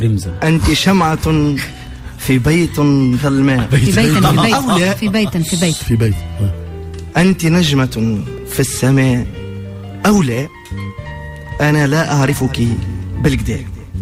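No technical faults can be heard anywhere in the recording.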